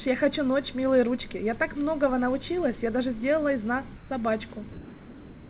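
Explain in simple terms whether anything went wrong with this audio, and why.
Between 3.96 and 4.1 s, the background briefly turns flat, smooth and slightly quieter. This is comfort noise in place of the background. The sender likely stopped sending during a pause, so the receiver filled those 140 ms with synthetic noise.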